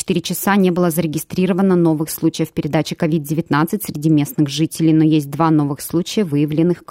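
No technical faults can be heard anywhere here.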